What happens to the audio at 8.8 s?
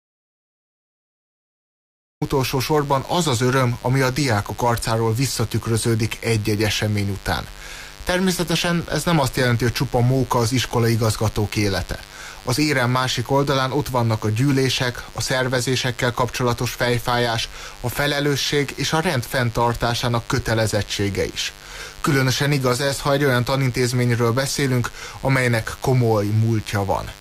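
At 8.8 s, as throughout, a raspy mains buzz sits well below the sound: switching spikes at twice the 50 Hz mains rate spray harmonics into the kilohertz range, unlike a smooth low hum.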